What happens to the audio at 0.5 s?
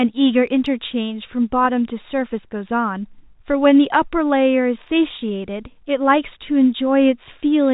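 Nothing goes wrong at 0.5 s: the speech there comes through intact, with only the narrow, telephone-band character of the G.711 coding it travels through.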